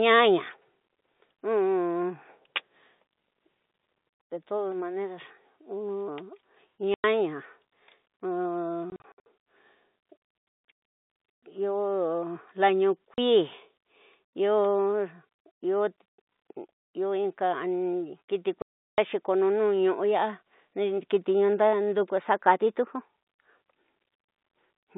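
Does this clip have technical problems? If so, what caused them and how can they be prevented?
Yes. The sound drops to dead silence from 6.94 to 7.04 s, in scattered gaps from 8.9 to 9.26 s, from 13.14 to 13.18 s, and from 18.62 to 18.98 s, just before "ko ñu". This is packet loss filled with silence. The receiver inserted nothing for the missing packets. The gap lengths fit 20 ms packets, and the gaps have hard edges. The telephone band of about 150 Hz to 3.7 kHz comes from G.711 coding. Packet loss concealment, forward error correction and a larger jitter buffer on a steadier network would prevent these holes.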